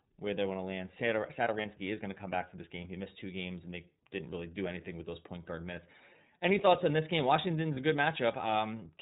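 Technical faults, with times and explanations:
Throughout: iLBC codec. The speech is band-limited to narrowband, with nothing above 4 kHz, so sibilants and airy consonants sound dull. The coder rebuilds each frame's excitation on its own, which gives the speech a plainly audible roughness and a slightly synthetic buzz. The damage is consistent with the 13.33 kbps mode working in 30 ms frames.
1.61 to 1.66 s and 7.74 to 7.78 s: lost iLBC frames. At each point a short stretch of speech is replaced by a brief held, faintly buzzy vowel-like tone. The decoder fills a missing packet by repeating the last pitch cycle blended with noise. Each gap sounds like a single 30 ms frame went missing. Because every iLBC frame decodes independently, clear speech returns immediately after each patch, with no lingering smear.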